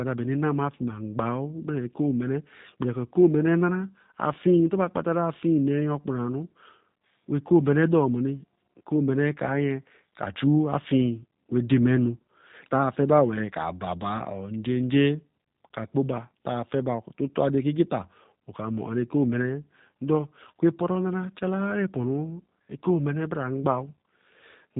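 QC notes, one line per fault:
throughout: G.729 codec. The sound points to a low-rate CELP speech coder of the G.729 kind at about 8 kbit/s, which rebuilds each 10 ms frame from a vocal tract filter, a pitch predictor and a handful of pulses rather than the original waveform. The damage is plainly audible: nothing passes above 4 kHz, so the top end is dull, and the pulse-based excitation gives the speech a slightly rough, synthetic edge.
12.18 to 12.21 s: VoIP packet loss concealed by the speech codec. About 20 ms of coded speech never arrived, which fits two lost 10 ms frames, and the decoder filled the gap by extending its last pitch and filter settings at falling gain. Over roughly 34 ms the speech smears into a brief stretched sound that fades, and because each frame is predicted from the one before, the voice stays weak or distorted for tens of milliseconds or more after real packets resume.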